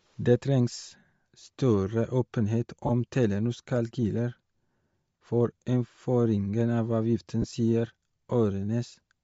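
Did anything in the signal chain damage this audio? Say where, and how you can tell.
Yes. Bluetooth LC3 compression is plainly audible throughout, at the codec stage. The speech has a breathy, grainy upper band where high frequencies were dropped and filled with noise, which fits roughly 32 kbps LC3 in 10 ms frames as the likely cause.

Lost LE Audio frames occur at 2.87 to 2.91 s, just after "større åpenhet", and at 7.42 to 7.44 s, after "for innføringen av avgiften". This is a network-stage fault. Each gap lasts about 20 ms, consistent with two dropped frames, which the decoder concealed by repeating the previous spectrum with scrambled signs. The result is a short noisy smear.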